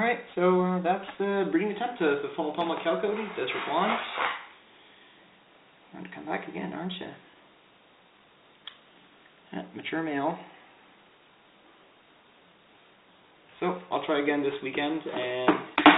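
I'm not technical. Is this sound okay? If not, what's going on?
Yes, this sound is okay, with nothing going wrong in it.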